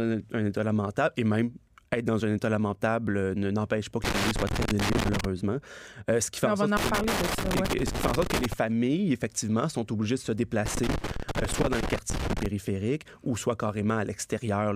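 A worn or dirty contact somewhere in the signal chain is making and breaking as it shifts, so the speech is repeatedly interrupted and any standing DC on the line turns each break into a pop. The result is loose connector crackle: irregular bursts of scratchy crackling that chop through the speech from 4.04 to 5.25 s, again from 6.77 to 8.53 s, and once more from 10.66 to 12.46 s.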